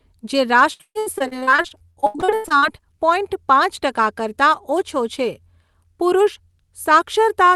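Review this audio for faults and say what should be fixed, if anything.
Repeated packet loss struck from 0.73 to 2.64 s, with about twenty holes (the longest 137 ms) patched by stretching earlier sound. Nearly half that span is concealment, so the speech turns choppy and robotic until just before "પોઈન્ટ પાંચ". To prevent it, stabilise the network link and enable forward error correction with a larger jitter buffer.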